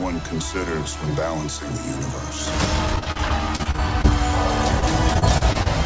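Repeated packet loss strikes from 2.96 to 4.06 s and again from 4.80 to 5.68 s. Each lost packet is patched by extending the preceding sound, leaving choppy, robotic audio with short holes.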